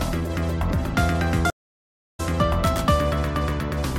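At 1.50 s a stream reconnect drops the audio for 0.64 s; playback resumes at 2.20 s about 0.7 s further along, as a new decoder joins mid-stream.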